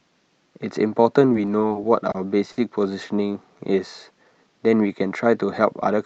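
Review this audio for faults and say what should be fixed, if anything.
Repeated stalls (stutter) from 1.33 to 2.16 s: packets kept arriving late, so the jitter buffer ran dry five times. The receiver continued the last sound to cover about 90 ms in total, the longest gap 30 ms. The speech there drags and stutters with nothing lost. To prevent it, let the jitter buffer grow sooner when arrival times start to spread.

A short stall from a late packet at 2.52 to 2.59 s: one packet missed its playout time after the network delay jumped by 50 ms. The receiver stretched the preceding sound for 50 ms until it arrived, leaving one sound held too long. To prevent it, keep enough buffer margin to absorb a delay step of that size.

A jitter buffer speed-up from 5.65 to 5.99 s: after the backlog built up, the receiver cut roughly 40 ms of pitch periods to reduce latency. The speech plays at about 109% speed with unchanged pitch and sounds hurried. 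To prevent it, drain excess buffer more gradually, ideally during pauses.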